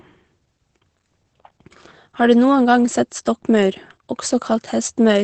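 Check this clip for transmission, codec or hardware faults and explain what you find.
There's one fault, and it runs through the whole clip: Opus voice compression. The speech sits in a wideband SILK-style coding with nothing above about 8.6 kHz, and the coarse excitation coding leaves it plainly muffled, a bit hoarse and faintly robotic, which fits a low bitrate around 12 kbps.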